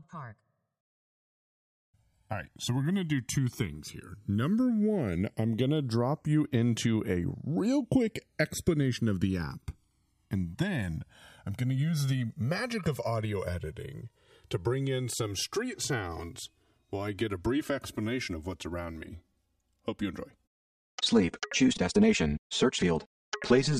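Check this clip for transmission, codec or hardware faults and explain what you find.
There's one fault, channels drifting apart, running the whole way through. The two sides seem to be on separate clocks, off by a few hundred ppm, so their offset creeps to around 5 ms and the mono sum picks up a slowly sweeping flange.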